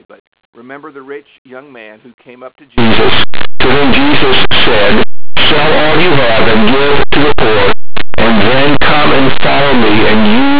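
At 2.78 s, right after "who came up to", linear audio read as companded takes over to the end. Plain 8-bit samples are being expanded as mu-law codes. Small values just across zero blow up to near full scale. The result is harsh, loud distortion.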